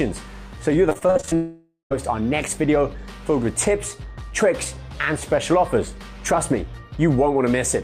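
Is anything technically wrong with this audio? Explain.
Yes, there are two problems, back to back near the start.

From 0.89 to 1.33 s there's repeated packet loss, the robotic sound. The audio keeps losing chunks, each up to about 47 ms, roughly nine in quick succession. The receiver patches every hole by stretching out whatever came just before, so close to half of that stretch is filler rather than real audio. The result is choppy, with bits of the sound simply gone.

Right after, from 1.35 to 1.92 s, the audio drops out for about 0.56 s. What you hear is the last bit of sound smeared on as a buzzy, fading tail, then about 0.12 s of near-silence before the audio picks up again, with that whole half-second missing. It's likely a long network dropout, where nothing reached the receiver and it could only extend the old sound until it gave up.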